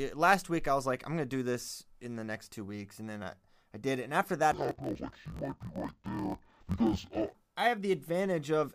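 From 4.52 to 7.37 s, the speech suffers interleaved audio read as planar. Each block of about 21.77 ms held alternating channel samples but was split into halves. Both halves play at half speed together. Pitch drops an octave, while pacing holds, repeating at 45.9 Hz.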